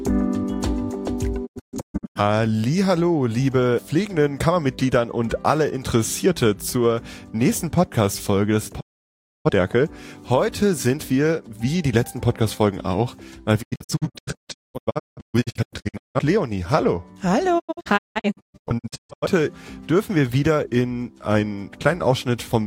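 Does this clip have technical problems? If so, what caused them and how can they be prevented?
Yes, there is a digital broadcast dropout. The receiver muted with 20 ms fades to true silence whenever frames failed, at 1.45–2.20 s, 8.79–9.50 s, 13.61–16.19 s and 17.58–19.26 s. All but the second are clusters of short holes, the longest about 0.21 s. Hard silences with clean fades tell it apart from crackly packet-loss concealment. A stronger signal or better antenna placement prevents it.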